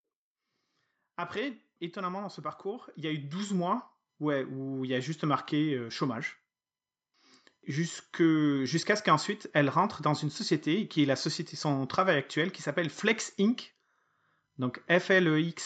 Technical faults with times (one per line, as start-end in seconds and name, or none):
1.03-6.29 automatic gain rising